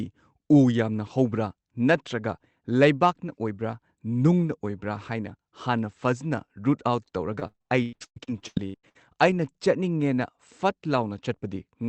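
From 7.33 to 9.29 s the speech breaks up with repeated packet loss, giving that robotic sound. Around a dozen short holes land back to back, the longest about 116 ms, and each is patched by stretching the last bit of sound, so roughly 40% of that stretch is concealment rather than real audio. It comes across choppy, with chunks missing, over a call path whose top end stops near 8 kHz.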